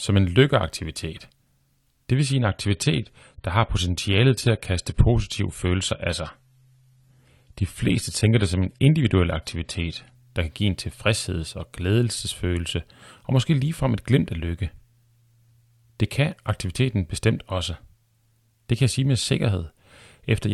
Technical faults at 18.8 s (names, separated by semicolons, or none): none